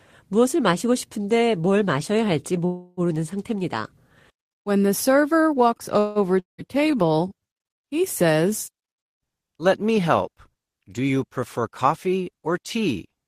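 At 2.65 s and again at 5.99 s the speech stalls in a call audio freeze. The last sound is stretched into a fading buzz for about 0.32 s and then 0.16 s, likely because packets were delayed and the jitter buffer ran dry. Unlike a dropout, the speech resumes exactly where it stopped, so nothing is lost and only a pause is added.

At 6.39 s a long network dropout follows. A fading buzz lasts about 0.19 s and then leaves about 0.14 s of silence, likely because packets never arrived. When the speech returns at 6.61 s, about 0.3 s of it is simply gone, which is what separates this from the freezes.

From 6.69 to 7.48 s a jitter buffer slow-down plays the speech at 88% speed, adding about 100 ms by repeating pitch periods. The speech is drawn out, but the pitch stays the same, unlike slowed tape.

From 11.58 to 13.07 s a jitter buffer speed-up runs the speech at 109% by cutting short pitch periods, removing roughly 150 ms. 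The speech sounds hurried, and the pitch again does not rise.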